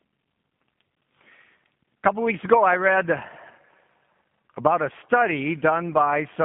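From start to finish the speech has passed through the G.729 codec, and the artefacts are plainly audible. The coder does not carry the waveform itself. It rebuilds each 10 ms frame from a vocal tract filter, a pitch predictor and a few pulses, which fits G.729A at 8 kbit/s. The line band runs only from 150 Hz to 3.5 kHz, so the speech sounds thin and muffled, with a rough, synthetic buzz.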